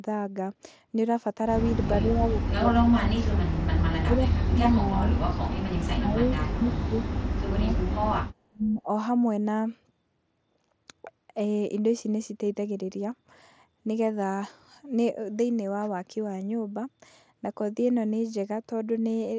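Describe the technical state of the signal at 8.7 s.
At 8.7 s the speech sits inside a dip from 8.5 to 8.88 s. The level falls steeply, by about 30 dB at its deepest. This is likely speech suppressed in double talk: the echo canceller mistook the talker for far-end echo and turned it down.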